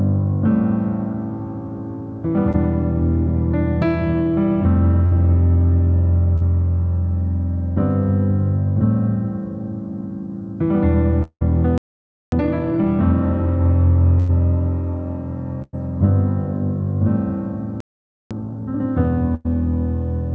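Short concealed packet loss at 2.52–2.56 s and 6.37–6.43 s: about 20 ms and then 40 ms of audio never arrived. The receiver bridged each gap by extending the preceding sound, leaving a brief smear before the real audio resumes.

Burst of packet loss at 5.06–5.15 s, 14.19–14.30 s, 15.62–15.75 s and 19.35–19.47 s: runs of roughly 60 to 100 ms went missing. Each gap was filled with a continuation of the last sound that fades, heard as a short held buzz or hiss. At 15.62 s it fades into about 30 ms of silence before the audio resumes further on.

Long network dropout at 11.23–11.43 s: about 180 ms of audio is replaced by a fading continuation and then roughly 70 ms of silence, likely because nothing arrived from the network for that stretch. The lost portion is skipped.

Playback stall at 11.78–12.32 s: the output goes silent for about 0.54 s in mid-flow, likely because the player ran short of data.

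Time-compressed catch-up at 12.32–12.86 s: the player clears its backlog by running at double speed with small splices. The audio sounds hurried at unchanged pitch.

Playback stall at 17.80–18.31 s, likely the player again starving: the sound halts for about 0.50 s.

Time-compressed catch-up at 18.31–18.81 s: another double-speed rush at normal pitch follows the second stall.

Throughout, the call path's band limit is audible as nothing above about 7 kHz, which fits G.722 at 64 kbps.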